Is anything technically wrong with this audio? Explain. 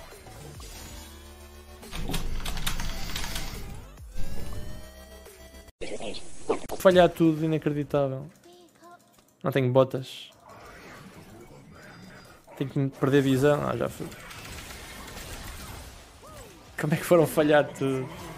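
Yes. Chunks out of order occur at 6.6 to 6.8 s and 11.9 to 12.2 s: a 100 ms block plays one chunk late, then two chunks late. Each misplaced block leaves three hard joins, heard as a brief jumbled stretch.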